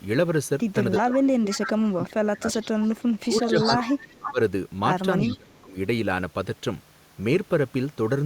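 Echo leak in this speech recording appears at 0.92–1.98 s, 2.56–4.32 s and 5.2–5.6 s as a copy of the voice trailing 335 ms behind, roughly 10 to 15 dB below the direct speech, likely from a far-end loudspeaker whose echo canceller let part of its microphone pickup return. Speech suppressed in double talk runs from 1.03 to 4.39 s and 5.26 to 5.76 s, where the talker drops by up to around 25 dB in patches totalling about two seconds and half a second, likely as the canceller clamps down on both voices while they overlap.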